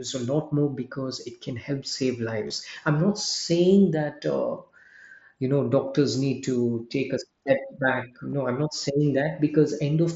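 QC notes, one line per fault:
2.48–2.50 s, 4.84 s and 8.30–8.33 s: concealed Bluetooth headset packet loss. Lost headset packets (22.5, 7.5 and 30 ms) were filled by repeating the best-matching recent waveform. The 4.84 s gap before "you know doctors need" is nearly hidden. The gap after "it can help save" and the one before "i'm not saying" give a brief buzzy, held tone with a slight warble at the rejoin. On a spectrogram they show as short stretches of evenly spaced, steady harmonic lines. On the waveform they show as repeated identical cycles at full level.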